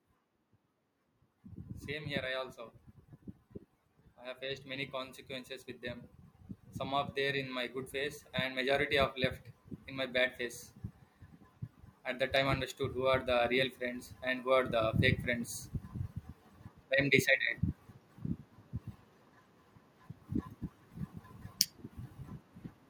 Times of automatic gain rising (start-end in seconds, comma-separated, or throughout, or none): 6.78-8.98, 12.04-15.07